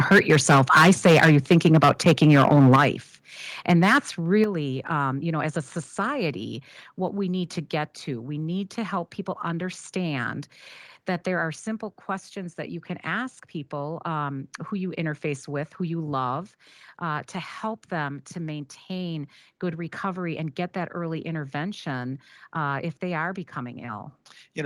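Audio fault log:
0.11–2.85 s, microphone overload: harsh, crackly edge on loud syllables, likely from input gain set too high, with peaks about 12 dB over the converter's limit and roughly a tenth of samples flattened.
0.13 s, microphone volume stepped down: sound and background drop by about 2 dB at once, likely the call software lowering input volume in one step after the distorted peaks.
2.76 s, microphone volume stepped down: a sudden fall of about 8 dB at the end of the overloaded stretch, likely as the input volume is cut again.
3.70–3.98 s, microphone overload: a shorter burst of crackling distortion, with peaks about 6 dB over the limit and around 3% of samples clipped flat.
4.44 s, microphone volume stepped down: level drops about 6 dB just before "um you know as", likely another one-step cut after the clipping.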